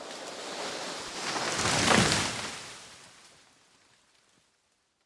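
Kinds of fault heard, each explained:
No kinds of fault are heard in this clip.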